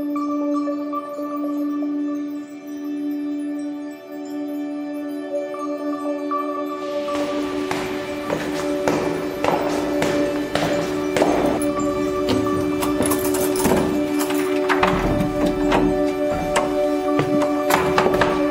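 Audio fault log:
No audible faults anywhere in the recording.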